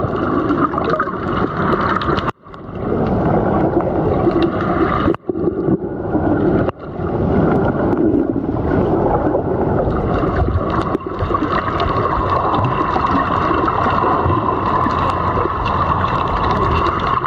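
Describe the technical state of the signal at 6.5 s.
Gain pumping is present at 6.5 s, as throughout the clip. The gain swings roughly 20 dB, squashing loud and soft parts closer in level, likely from an overdriven input and fast limiter.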